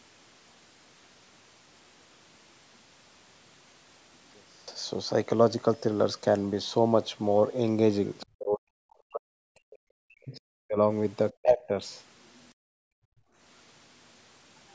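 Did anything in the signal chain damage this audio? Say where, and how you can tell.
Yes. The first stretch, 0 to 4.68 s, sounds faint, with the level down about 29 dB. The likely cause is one channel inverted somewhere in the analogue wiring or the stereo handling, so when the two sides get summed to mono, everything they share cancels. Centred speech and the low end mostly disappear, and you're left with just the faint difference between the channels until it snaps back after 4.68 s.

There's also the other side's voice leaking through, which points at the call processing stage. You get a tiny scrap at 8.2 s, sitting roughly 25 dB under the talker, and a longer, much quieter bit from 12.27 to 12.5 s, down around 40 dB. It's likely residual loudspeaker echo that the echo canceller didn't fully scrub from the mic feed, so the far end's audio sneaks back in faintly.

Right on the heels of that first leak, the talker's own speech gets pushed down hard from 8.24 to 10.77 s, with about two seconds of it affected and the deepest dips around 40 dB. 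It happens again, briefly, from 11.36 to 11.73 s. That's speech suppressed in double talk, likely the echo canceller hearing both sides at once, failing to tell them apart, and clamping down on everything.

Then from 12.54 to 13.38 s the room tone itself drops out, by up to about 35 dB, for roughly a second, and comes back once the canceller releases. That's background gated by the echo canceller, which ducked the microphone while the loudspeaker was active. The band limit at 8 kHz, where nothing sits above that, is just the normal call mic processing and isn't a fault.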